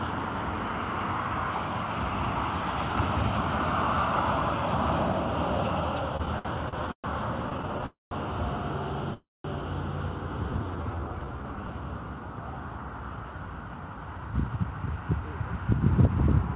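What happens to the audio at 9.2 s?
At 9.2 s there is a call audio freeze, from 9.14 to 9.46 s, likely caused by packets stalling in transit until the jitter buffer ran dry. The receiver carried the last sound on as a fading buzz or hiss that sinks into about 0.19 s of silence. When packets resumed, the audio picked up exactly where it stopped, so nothing is lost, but everything after runs about 0.31 s late. The narrowband sound, capped near 4 kHz, fits a G.711 call path.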